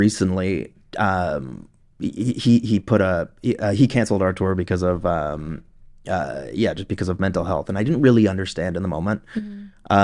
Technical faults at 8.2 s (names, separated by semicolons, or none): none